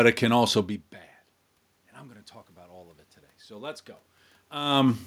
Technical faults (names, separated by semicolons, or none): automatic gain rising